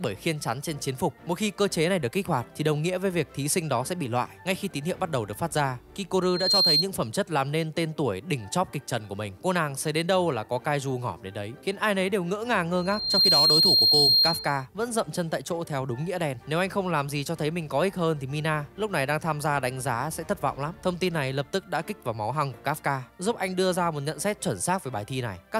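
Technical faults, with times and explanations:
6.22–6.88 s and 12.77–14.66 s, loudspeaker feedback squeal: a single 4.2 kHz tone swells over roughly 0.3 s, then 0.4 s, to about 5 dB, then about 10 dB, above the audio. The microphone is re-amplifying its own loudspeaker, and loop gain exceeds unity at that frequency.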